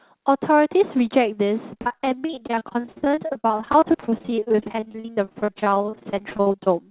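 From 1.74 to 6.69 s the speech goes choppy and robotic: repeated packet loss, nearly half the stretch filled by continuing the previous sound.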